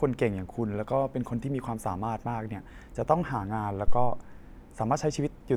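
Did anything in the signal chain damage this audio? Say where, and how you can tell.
Yes: a phantom power thump at 3.88 to 4.27 s, in the analogue input stage. A supply switched on a live input sends a voltage step through the coupling capacitors, heard as a deep low thump peaking at about -11 dBFS and decaying over 89 ms.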